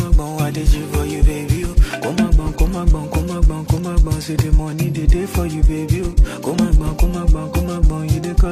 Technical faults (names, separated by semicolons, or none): none